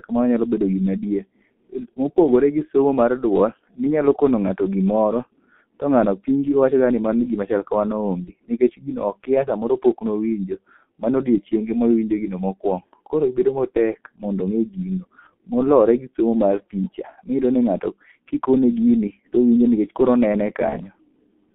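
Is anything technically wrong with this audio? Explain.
Yes, the clip has two problems. The G.723.1 codec affects the whole recording, and two short dropouts come from VoIP packet loss concealed by the speech codec.

From start to finish the speech sounds muffled, hoarse and heavily degraded, with smeared consonants and no bass or treble. This is the G.723.1 codec at 6.3 kbit/s. Its band runs only from about 200 Hz to 3.5 kHz, and it tracks the voice in coarse 30 ms frames, so fast detail is lost and rebuilt roughly.

At 8.24 to 8.32 s and again at 20.69 to 20.78 s, the speech briefly turns into a stretched, fading sound and stays weak for a moment afterward. Each gap fits a single lost 30 ms packet. The decoder filled the gap by extending its last pitch and spectral shape at falling gain. Because each frame depends on the one before, the distortion runs to roughly 80 to 90 ms, well past the missing 30 ms.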